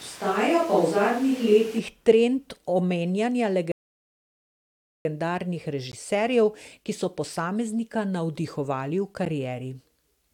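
Speech, with three kinds of fault. From the start to 1.78 s the voice sounds roomy and hollow, with thin bass and background noise only about 25 dB below the speech. The level barely changes. This is likely a switch to a distant microphone. A rebuffering stall runs from 3.72 to 5.05 s. The sound stops dead, then resumes exactly where it left off, adding 1.33 s. Two blocks of digital silence are heard as ticks or dips, at 5.92 s (about 15 ms) and 9.25 s (about 11 ms). The sound drops to silence and back with no fade. The second fits a 512-sample buffer that was not filled in time.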